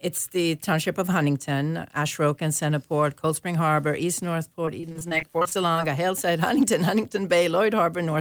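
From 4.65 to 5.77 s the sound turns choppy, with small pieces missing. This is repeated packet loss: a dozen or so dropouts, none longer than 25 ms, each patched by stretching the last sound, concealing about a quarter of that stretch.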